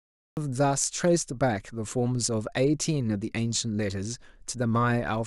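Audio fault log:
0.00–0.37 s, cut-off start: capture began late, so the clip opens on digital silence and then drops straight into speech already under way at 0.37 s. There is no natural attack or lead-in, and the sound lands abruptly, mid-utterance, with a hard edge.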